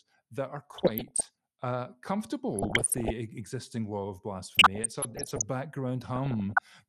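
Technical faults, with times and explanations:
Throughout: MP2 compression. The speech sounds dull and muffled, with a gurgling, granular roughness and upper frequencies that come and go. This is likely MPEG Layer II coding at a low rate, consistent with about 80 kbps. The coder divides the spectrum into 32 sub-bands and, short of bits, shuts off the higher ones and quantises the remaining bands coarsely, so detail is lost and the residue turns gritty.
0.74–1.31 s, 2.50–3.10 s, 4.43–5.43 s and 6.16–6.68 s: DAB burbling. In each span short blips of noise within single sub-bands break into the speech, the longest burst being the full second from 4.43 s. Such bursts fit a weak DAB signal, with bit errors under one percent slipping past error correction into the MP2 stream. Corrupted samples then put short noise blips into single sub-bands, and corrupted scale factors make sub-bands jump in level for up to a frame.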